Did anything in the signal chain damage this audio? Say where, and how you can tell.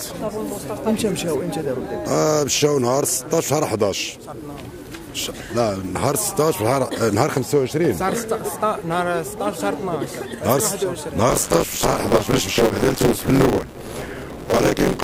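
Yes. From 11.29 s to the end there's buffer tearing at the driver/buffer stage: a robotic 100 Hz buzz, only while there's signal. Writer and hardware reader have slipped on a ring buffer whose period is about 10 ms, so roughly half of each period replays audio from a lap earlier.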